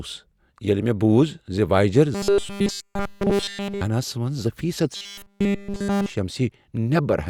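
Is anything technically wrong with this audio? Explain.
Yes. From 2.15 to 3.81 s, just after "بوٗز زِ واییجر", and again from 4.96 to 6.10 s, the speech becomes a rigid, metallic 200 Hz buzz. It is likely robotic sound from repeated short buffers: a 5 ms slice looped while nearly all new audio is skipped.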